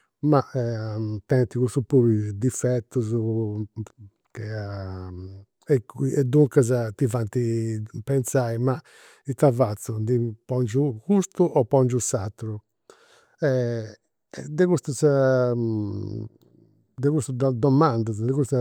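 A speech recording with chunks out of order at 13.23 s: one 5.8 ms chunk arrived two chunks late, causing a brief jumbled blip at the hard joins.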